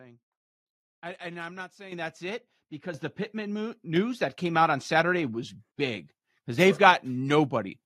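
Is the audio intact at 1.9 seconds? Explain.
No. At 1.92 s the microphone volume is stepped up: the call software judged the input too quiet and raised the device's gain in a single jump of about 10 dB, so the speech and background noise suddenly get louder together.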